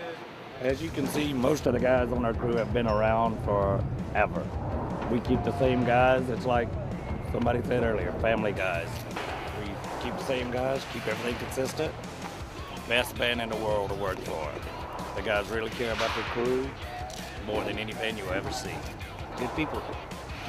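De-emphasis applied wrongly affects the audio from 1.65 s to 8.57 s. A treble-cut curve meant to reverse pre-emphasis has been run on material that never received that boost, or run a second time, so nothing is restored and the highs are simply cut. The response slopes smoothly downward, sitting about 11 dB lower at 10 kHz than at 1 kHz. Across this span the sound turns dull and muffled, with crispness and air noticeably missing.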